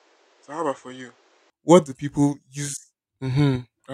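Input switched to a poorer device, from 0.0 to 1.5 s: the speech has nothing above 8.4 kHz, sits about 5 dB quieter and carries its own background noise roughly 30 dB below the speech, then opens up cleanly at 1.5 s with no gap, likely a different, narrower-band microphone in use at the start.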